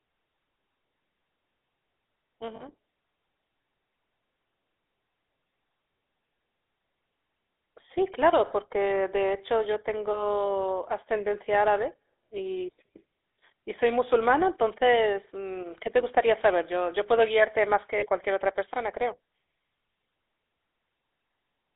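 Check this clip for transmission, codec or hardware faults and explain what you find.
Two faults are present: a GSM full-rate codec throughout the speech, and two short bursts of lost GSM frames.

Throughout, the speech has a buzzy, gravelly roughness, squeezed into a narrow band of roughly 300 Hz to 3.6 kHz, and the damage is plainly audible. That points to the GSM full-rate codec at 13 kbps, which rebuilds the voice from a vocal-tract model excited by sparse, regularly spaced pulses.

At 2.56 to 2.65 s and again at 17.98 to 18.07 s, the sound briefly freezes into a rough, metallic ring lasting about 40 ms. These are lost GSM frames, likely two 20 ms frames each time. The decoder repeats the last good frame's settings to fill the gap.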